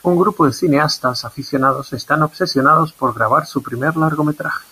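Speech cut by the noise suppressor recurs at 1.22, 1.83, 2.29, 2.88, 3.43 and 4.34 s, each stretch lasting about 0.3 s. The suppressor mistakes quieter parts of the speech for the room noise, which sits about 21 dB below the voice, and pulls them down by about 12 to 18 dB. Fragments sound swallowed rather than silenced. Unlike a dropout, there is no hard gap or click, just a sag lasting a fraction of a second.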